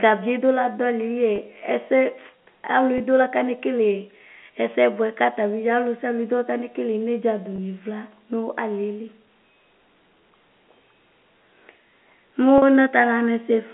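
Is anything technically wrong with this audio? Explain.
Yes. Brief held, slightly buzzy moments in the speech at 1.36–1.38, 2.98–3.00, 7.56–7.58 and 12.58–12.62 s are packet loss with pitch repetition: the receiver bridged each gap by repeating the last pitch period. The first three gaps are 20 ms each, fitting one lost packet, and the last is 40 ms. All of this sits within the narrow telephone band of the G.711 line, about 200 Hz to 3.4 kHz.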